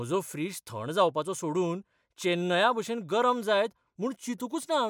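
No technical faults detected.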